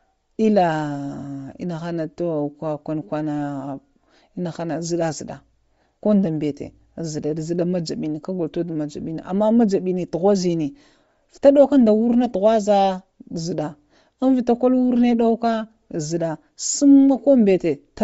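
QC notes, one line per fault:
Throughout: Bluetooth LC3 compression. The speech has a plainly audible breathy, grainy edge, where the upper spectrum has been thinned and refilled with noise rather than real detail. The damage most likely comes from LC3 coding at a low rate, and the texture fits roughly 32 kbps with short 7.5 ms frames. On a spectrogram the upper band looks patchy and speckled instead of tracking the voice's harmonics, while the waveform shows little change.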